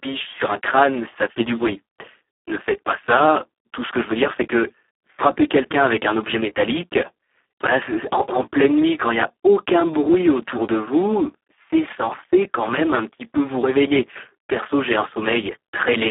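From the first second to the last, the speech sits inside a narrow telephone band, roughly 300 Hz to 3.4 kHz, and it's been through the Speex codec at a very low rate, which fits around 4 kbps. There's simply too little data left for the excitation, so the damage is heavy: the voice comes out hoarse, buzzy and a bit robotic, with a noisy grain on every syllable. Above about 3.8 kHz there's nothing at all, so there's no air or sibilant detail.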